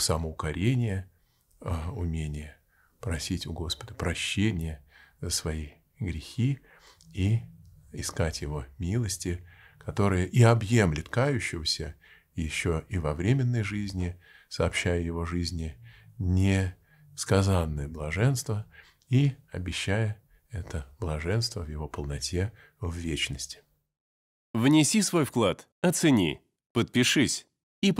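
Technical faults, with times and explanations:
Nothing here trips the ear at all, just steady, untroubled audio from the first moment to the last.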